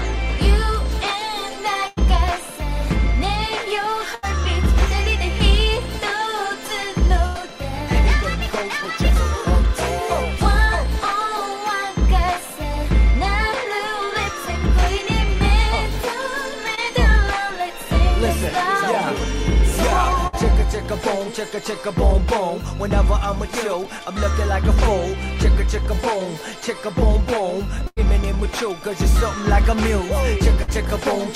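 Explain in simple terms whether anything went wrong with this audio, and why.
Two related network faults break up the audio.

The main one is a burst of packet loss, heard six times: at 1.87–1.99 s, 4.15–4.25 s, 7.27–7.37 s, 20.27–20.35 s, 27.87–27.99 s and 30.63–30.70 s. Each time, between 60 and 100 ms of audio never arrived. The receiver stretched the last bit of sound to cover the hole while fading it out, so you hear a short held buzz or dying hiss. Then the audio jumps ahead with that slice gone.

The other is a short concealed packet loss at 16.75–16.79 s. Only about 20 ms went missing here. The receiver patched it by continuing the sound just before and blending back into the real signal. The result is a brief smear or wobble rather than an obvious gap.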